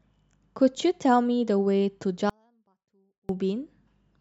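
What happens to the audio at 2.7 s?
The signal feed was likely interrupted while the path after the break stayed live, causing an audio dropout to a faint residue from 2.30 to 3.29 s. The speech cuts out abruptly, leaving only a faint residue about 40 dB down for roughly a second.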